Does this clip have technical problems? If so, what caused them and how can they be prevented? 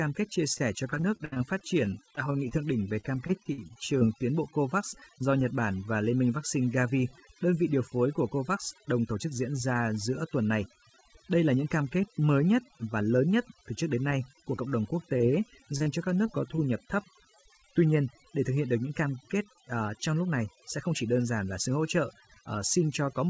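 Yes. The clip is speech, and three faults stand out.

Overdone noise removal runs through the whole clip. The noise reduction was set too strong. Frequency bands near its noise estimate get pushed far down or switched off, and quieter parts of the voice go with them. The background drops and breaks up into twinkling specks. Use a gentler reduction setting, or record in a quieter space so heavy cleanup isn't needed.

Repeated packet loss, heard as robotic sound, runs from 0.54 to 4.03 s, between "kết chia" and "tiến bộ". The sound suggests around twenty separate losses close together. About 360 ms of audio is missing. Roughly 430 ms was patched by stretching the last sound forward, about 12% of that stretch. The longest hole is about 66 ms. The result is choppy and robotic, with pieces missing. A steadier network connection, or wired instead of wireless, would prevent this.

Scattered short gaps appear from 14.56 to 16.60 s, between "trước đến nay của" and "nhập thấp". 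There are about seven isolated losses, each patched by continuing the previous sound. About 120 ms is missing, and roughly 150 ms was filled in, around 7% of the span. None is longer than about 20 ms. The speech stays clear but has brief ticks and hiccups. Reducing network congestion during calls would prevent these dropouts.

Nothing is heard above 8 kHz, which fits a wideband call codec such as G.722.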